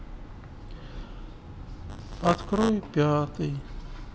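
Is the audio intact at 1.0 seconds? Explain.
Yes, the speech at 1.0 seconds is intact, with no dropout, click, distortion or other fault at that moment.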